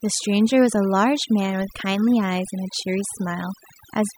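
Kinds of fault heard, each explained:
Overdone noise removal: noise reduction set far too aggressively pulls individual frequency bands down whenever they approach its noise estimate, across the whole clip, leaving near-silent gaps with twinkling specks. A spectrogram shows scattered isolated blobs and holes between harmonics.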